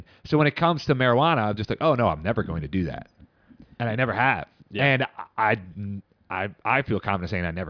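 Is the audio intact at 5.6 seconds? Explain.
Yes, at 5.6 seconds the speech plays through cleanly, with no dropout, click, distortion or other fault to be heard at that moment.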